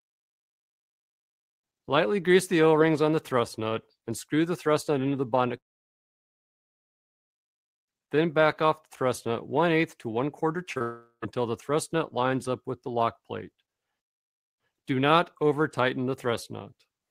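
From 5.57 to 7.31 s there is a long network dropout, most likely a stretch where the stream stopped arriving. The last sound is briefly carried on as a fading buzz, then the gap falls to near silence for about 1.7 s. The sound resumes further along, with that material simply missing. The length of the hole and the dead stretch inside it set this apart from a brief concealed loss.

At 10.73 to 10.78 s and again at 10.78 to 10.82 s come two short concealed packet losses, about 40 ms and 20 ms of missing audio. The receiver bridges each one by extending the preceding sound and blending back into the real signal. Each is heard as a quick smear or wobble with no silence.

Right after them, from 10.82 to 11.24 s, a second long network dropout follows, likely again an interruption in delivery. About 400 ms of audio is lost. The filled sound fades out and leaves roughly 90 ms of near silence before the sound picks up later in its course. 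That audible drop to quiet separates it from the brief smears just before.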